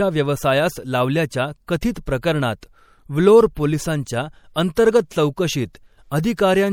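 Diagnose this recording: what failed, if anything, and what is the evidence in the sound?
MP3 compression throughout, at the codec stage: plainly audible coding damage and no content above 19.2 kHz, likely a bit-starved encoder, fitting a 64 kbps stream.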